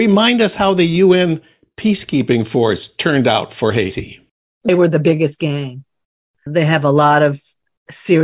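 No technical faults can be heard anywhere in this speech recording. There is nothing in the audio to mark at any point along its timeline.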